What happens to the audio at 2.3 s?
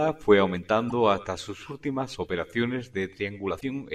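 Nothing goes wrong at 2.3 s; the audio carries straight through that moment with no dropout, click, distortion or other fault.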